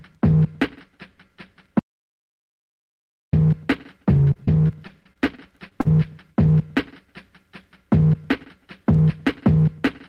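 From 1.79 s to 3.33 s the sound stops dead and the track falls to silence, with no room tone or hiss underneath, before resuming abruptly. About 1.54 s of material is simply gone. This is an audio dropout to silence. The likely cause is that the input was briefly lost, through a disconnected device, a broken link or an accidental mute, while the recorder kept writing silence in its place.

Between 4.33 s and 5.87 s the sound turns choppy, stuttering through about nine short holes, the longest around 41 ms. This is repeated packet loss. Each missing chunk was patched by extending the preceding sound, which gives the choppy quality with pieces missing. Roughly 200 ms went missing across the stretch and about 196 ms of it was filled by concealment, about 13% of that span.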